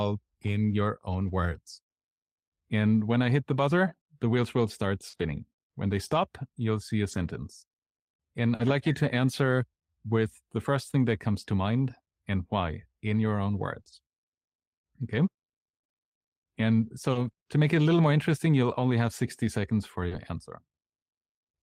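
At 1.27 s, and again at 5.13 to 5.23 s, 7.11 to 7.29 s, 8.59 to 8.69 s, 13.75 to 13.81 s and 13.87 to 13.93 s, a lost packet was rebuilt from error correction. Each missing stretch, 20 to 100 ms long, played from a low-bitrate copy carried in the following packet. The result is rough and grainy rather than silent. On a spectrogram these show as short patches of blurred, noisier harmonics.

Short concealed packet loss sits just before some of those rebuilds, at 5.09 to 5.15 s, 8.55 to 8.61 s and 13.83 to 13.87 s. There, 20 to 40 ms never arrived and the decoder extrapolated the last sound. That is heard as a brief smear or wobble and shows as smoothed, repeated-looking waveform cycles.

From 17.11 to 20.13 s, scattered short gaps appear: roughly seven separate holes, the longest about 40 ms, together about 5% of the stretch. Each is patched by continuing the previous sound. This gives small ticks and hiccups, visible as thin smeared slivers across the spectrogram.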